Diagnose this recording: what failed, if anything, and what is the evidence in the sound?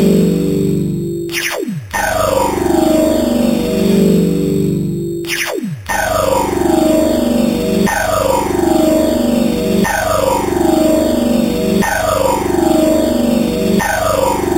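The failure is at the converter stage: imaging from sample-and-hold upsampling, present throughout. Above 4 kHz there is a bright, metallic fizz that rises and falls with the sound's own level, about 17 dB below it. The lowest image fills 4 kHz to 8 kHz and moves opposite to pitch. This points to an 8 kHz source raised to 48 kHz by repeating samples without an anti-imaging filter, leaving mirrored spectra around each 8 kHz multiple.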